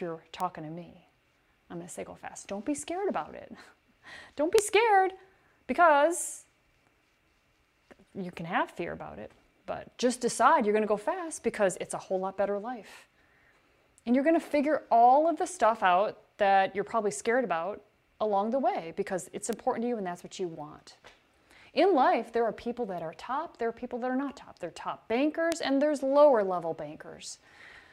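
Four bit error spikes occur, at 0.40 s, 4.59 s, 19.53 s and 25.52 s. Each is a single flipped bit in a stored or transmitted sample word, throwing the value off by a power of two for one to three consecutive samples before it snaps back. Each is a brief broadband tick unrelated to the surrounding sound. The one at 4.59 s is loudest, peaking near about -4 dBFS, against about -10 dBFS at 25.52 s and about -16 dBFS for the other two.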